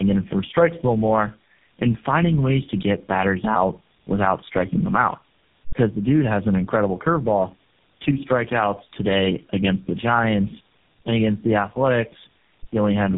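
Throughout the speech, tandem speech coding is audible: the sound was coded by three speech codecs in a row, which fits AMR-NB, AMR-NB and finally GSM full rate, each reworking the last one's errors. Speech is rough, muffled and warbly, with nothing above 3.7 kHz.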